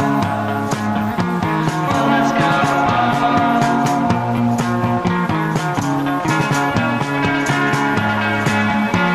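At 4.37 s there is a block of digital silence about 4.4 ms long. A run of samples drops out. The buffer was likely not filled in time. The sound cuts out and returns with no fade. The gap is short enough to be heard as a tick or dip, not as silence.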